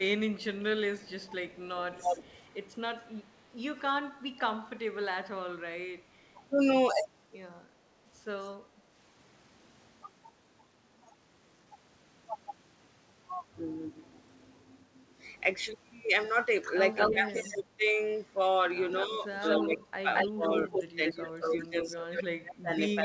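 The speech dips, by up to about 25 dB, at 0.0 to 0.08 s, 1.75 to 2.16 s, 4.31 to 6.39 s, 17.11 to 17.86 s and from 19.05 s to the end. This is speech suppressed in double talk: the echo canceller likely mistook overlapping far-end talk for its own echo and turned the talker down.

A delayed copy of the voice trails behind it at 0.36 to 2.35 s, 16.95 to 17.5 s and 18.95 to 22.19 s. It lags by 236 ms in the first stretch and by 222 ms in the later two, and it sounds fairly quiet at first and close to the speech level near 17 s. This echo leak is likely loudspeaker sound that the far end's echo canceller failed to remove, so it was sent back. Throughout the clip, the audio stops at about 8 kHz.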